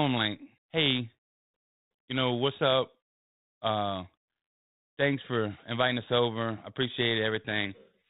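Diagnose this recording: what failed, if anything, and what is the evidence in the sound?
Nothing failed here: the speech comes through a 32 kbit/s G.726 telephone-style link with the band-limited sound you'd expect from that path, and there's no dropout, click, distortion or other fault to point to anywhere in it.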